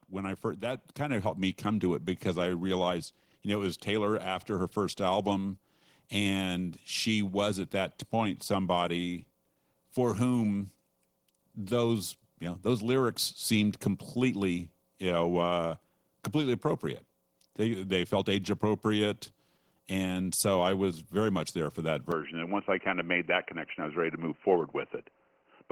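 A speech recording in which the level climbs slowly through the first 18 seconds: from 0.09 s to 17.99 s, voice and background noise swell together by about 7 dB, with no jump, settling just before "felt age appropriate and". This is automatic gain rising. The gain control judged the input too quiet and kept raising its gain step by step, so the room noise grows along with the speech rather than the speech alone getting louder. Then, from 22.12 s to the end, just after "much there for that", the sound turns abruptly dull and boxy with no gap and no real change in loudness. Nothing is left above 3 kHz, and a faint new background noise sits well below the voice. The likely cause is the input switched to a poorer device, such as a headset in its call profile, whose narrow band cuts off the upper frequencies and brings its own tone and noise.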